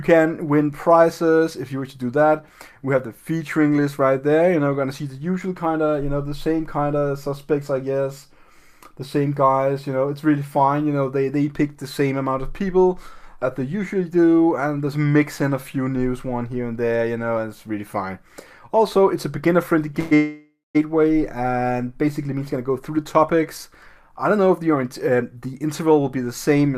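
Call audio freezes at 19.99 to 20.13 s and 20.15 to 20.77 s: the last sound is stretched into a fading buzz, the second ending in about 170 ms of silence, then the audio resumes with nothing lost. This is likely delayed packets emptying the jitter buffer. A jitter buffer speed-up runs from 22.32 to 26.74 s, with playback at about 107% speed and unchanged pitch. Repeated pitch-period-sized pieces are cut out, together about a third of a second, to trim the delay that built up during the freezes.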